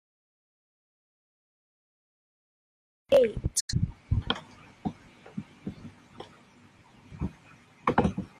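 At 3.60 s the speech drops into a digital broadcast dropout: an 8 ms fade to silence, a gap lasting until 3.73 s, then sound resumes further along. The receiver muted rather than concealing, which points to about two lost frames. Unlike analogue fading, there is no hiss, and nothing replays.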